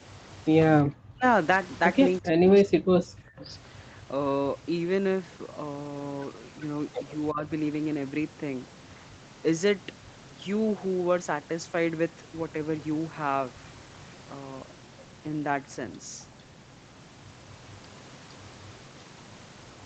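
The speech sinks sharply from 0.83 to 1.25 s and again from 2.2 to 3.49 s, losing around 40 dB at its deepest and affected for close to a second in the second stretch. At 7.31 to 7.46 s a briefer, shallower dip of about 15 dB follows. The likely cause is speech suppressed in double talk: with the far end talking at once, the echo canceller mistook this talker for loudspeaker echo and pulled the level down.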